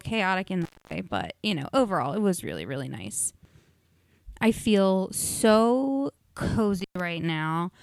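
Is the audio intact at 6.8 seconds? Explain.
No. At 6.8 seconds the speech runs into an intermittent contact, from 6.80 to 7.00 s. A loose cable or plug briefly loses its connection, so for about 112 ms the signal path is simply open and nothing from the source gets through. The speech drops out abruptly, with crackle at the edges where the contact scrapes open and closed, and a faint hiss remains in the gap before the sound returns.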